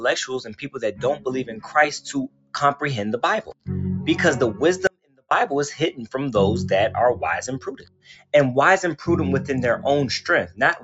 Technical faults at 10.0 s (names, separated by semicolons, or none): noise suppressor applied to music or sounds